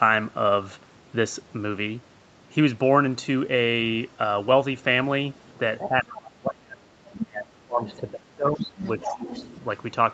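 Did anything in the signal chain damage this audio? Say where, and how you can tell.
Yes. A second, fainter voice breaks into the speech in short scraps at 5.45–5.52 s, 7.07–7.18 s and 7.84–8.1 s, then for a longer stretch from 8.58 to 9.56 s. It rises from roughly 35 dB below the main talker to about 10 dB below by the end. This is the other side's voice leaking through, likely from a loudspeaker echo the call processing's echo canceller failed to remove. It clusters with the level dips below.

The main talker's level collapses by roughly 30 dB from 5.78 to 6.92 s and from 7.17 to 8.63 s, with a shallower dip of about 10 dB at 8.99–9.23 s. The later collapses line up with the leaked voice, so this is likely speech suppressed in double talk. The canceller probably could not tell near speech from echo and turned everything down. Packet loss would cause sudden gaps or robotic concealment instead. 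Here the voice dips under gain reduction while the other voice is active.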